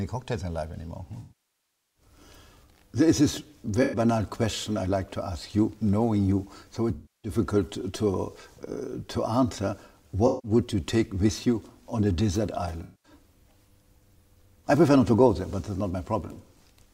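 AAC frame loss with concealment occurs five times. Stretches of coded audio went missing, and the decoder rebuilt each gap from the last good spectrum instead of leaving silence. The longest loss runs from 1.2 to 2.02 s, and shorter ones fall at 3.82 to 3.99 s, 6.94 to 7.32 s, 10.27 to 10.51 s and 12.83 to 13.12 s. In each gap the sound turns smeared, noisy or phasey.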